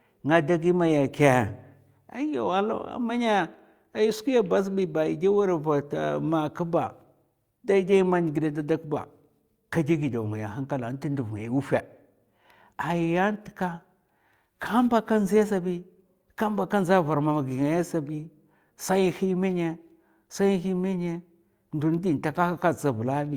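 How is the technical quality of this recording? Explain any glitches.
No glitches or technical faults are audible anywhere in the recording.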